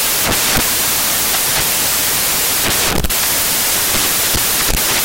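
From start to finish the audio is loud, hissing noise, close to white where the speech is loud. These are samples built from the wrong bytes: each value is assembled with its bytes misaligned or swapped, so the fast-changing low bits dominate.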